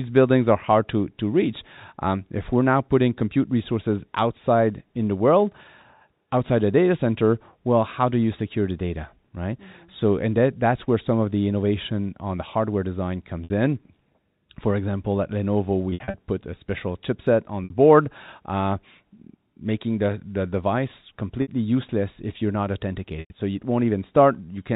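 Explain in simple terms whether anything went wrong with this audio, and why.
Packet loss with pitch repetition hit this telephone-quality speech five times. Pieces of the audio stream went missing, so the receiver filled each gap by repeating the last short stretch of voice. This happens at 13.44 s, 17.64 s and 21.42 s (about 60 ms each), at 23.2 s (100 ms), and in scattered bursts from 15.9 to 16.14 s. Each short gap sounds like a brief buzzy hold before the speech picks up again, while the longer one at 23.2 s fades into silence before the speech returns.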